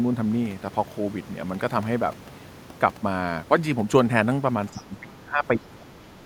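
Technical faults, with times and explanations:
4.72–5.89 s, speech suppressed in double talk: The talker's level sinks by around 20 dB at its deepest, and about a second of the speech in this stretch is pulled down or broken up. This is likely the echo canceller getting confused when both ends talk at once. It can't tell the near voice from the loudspeaker echo, so it plays it safe and ducks everything, taking the wanted speech down along with the echo.
4.77–4.81 s, other side's voice leaking through: A brief scrap of the far-end voice, roughly 25 dB under the main speech, slips through right inside that ducked stretch. It's quiet and short, so it reads as a faint blip rather than anything intelligible. The likely cause is the talker's loudspeaker bleeding into the mic, with the echo canceller failing to scrub out that last bit of residual echo while it was struggling with the double talk.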